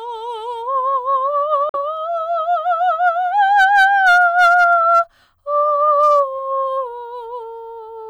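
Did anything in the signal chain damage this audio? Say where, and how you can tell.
Yes. A Bluetooth dropout, at the playback link, cuts the music to silence from 1.69 to 1.75 s. The gap lasts about 46 ms, which fits roughly three lost audio frames. When the sound returns, it picks up where the music would have reached had it kept playing, not where it stopped. That points to packets that missed their deadline over a wireless link, likely Bluetooth, rather than a stall in the source.

Hard clipping appears first as a brief crackle at 3.07 s, where peaks just touch the ceiling. It becomes sustained from 3.57 to 5.00 s, with the signal overdriven by about 4 dB and a harsh fuzz on loud passages. It returns more mildly from 5.90 to 6.20 s, at about 1 dB. A gain stage ahead of the converter or a sample-format conversion is passing more level than it can hold, flattening waveform peaks and spraying high harmonics.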